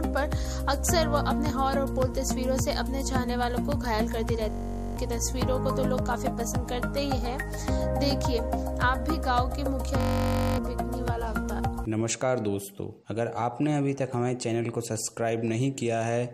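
At 4.50 to 4.97 s and again at 10.01 to 10.58 s, a system hang loop replaces the audio with a steady buzz near 46.9 Hz. The system froze while the output kept replaying one 21.33 ms slice, which fits a 1024-sample buffer, 22 and then 27 times. About half a second of audio is lost each time. Unlike a dropout's silence, the identical repeats produce a pitched drone.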